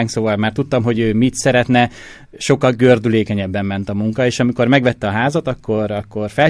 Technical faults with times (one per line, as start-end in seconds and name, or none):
none